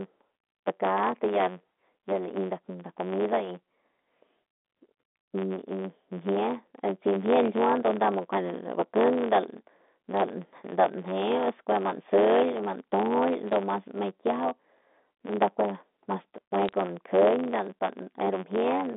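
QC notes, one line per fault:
Throughout: block size mismatch (truncated). There's a steady buzz at about 91.9 Hz running under the whole thing, and the speech feels a touch hurried, about 1.07 times normal speed. One stage is writing longer blocks than the next one reads, which fits 512-sample blocks with the tail of each dropped. Each chop lands at the block rate, hence the buzz, and the missing bits shorten the timeline.
10.17–10.21 s, 13.49–13.53 s, 16.65–16.73 s: bit errors on a digital phone line. Three short bursts of sharp ticks and crackle sit on top of speech that carries on unchanged. The error rate in each burst is low, a fraction of a percent. Flipped bits on the G.711 line each corrupt a single sample, and when a sign or high-order bit gets hit, that sample jumps hard and clicks. The 200 Hz to 3.6 kHz phone band sounds as it should.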